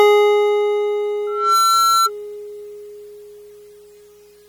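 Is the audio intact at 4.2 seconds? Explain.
No. At 4.2 s, as across the whole music clip, plainly audible MP3 compression damage is likely, with a sound that suggests a low bitrate near 48 kbps. Weak frequency lines drop in and out between frames, giving a watery, swirly texture. A spectrogram shows flickering gaps, with nothing above 20.9 kHz.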